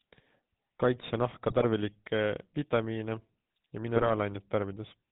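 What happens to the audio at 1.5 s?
From 1.48 s to 1.65 s the speech is hit by GSM bit errors. Corrupted bits reach the decoder and garble the filter, pitch and gain parameters it uses to rebuild each frame. The spectrum bends and the level jumps, so for about 0.17 s the sound breaks into squawks, pops and gargling. The span fits roughly eight consecutive 20 ms frames being damaged, and the density of the damage points to a bit error rate of around 2%.

Underneath this, the whole clip, including this moment, carries the GSM full-rate codec at 13 kbps. That codec rebuilds the signal from a vocal-tract model excited by regularly spaced pulses, keeping only a third of the excitation samples. Nothing above 4 kHz comes through, and the speech has a plainly audible buzzy, gravelly roughness.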